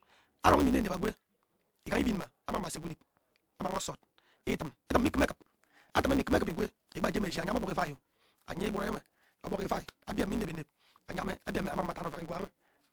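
From the start and throughout, a block size mismatch (truncated) drops each block's tail, which fits 512-sample writes, adding a 138 Hz buzz and running the speech 1.6 times fast at near-normal pitch.

At 0.42 to 0.44 s, pre-echo from transform-codec quantisation noise spreads about 37 ms ahead of a sharp attack, heard as a brief hiss with a softened onset.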